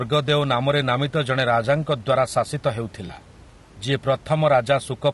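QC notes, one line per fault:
Throughout: low-delay AAC compression. The speech is plainly damaged all the way through, rough and grainy, with a hiss sitting between the harmonics and a top end that sounds thin and a bit synthetic. That's likely a low-delay codec like AAC-ELD, whose very short frames can't pin down pitch harmonics well, and the degree of damage fits a low bitrate, around 32 kbps. The room noise, about 26 dB under the speech, sits behind all this.
3.07 to 3.10 s: AAC frame loss with concealment. There's a brief smeared, noisy patch lasting about 20 ms, which fits a single lost frame. The decoder had nothing to play for that stretch, so it improvised from the last good spectrum, reusing its energy with scrambled phase. That's why you get a blurry, phasey blip instead of a dropout, and it's short enough that there's no fade to silence.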